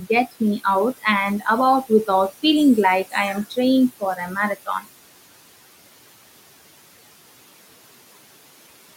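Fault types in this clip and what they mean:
Noise suppressor artifacts: a frame-by-frame noise reduction stage acts throughout, cutting the room noise, which sits about 17 dB below the speech, by about 18 dB in pauses, so the background drops away between words and comes back underneath them.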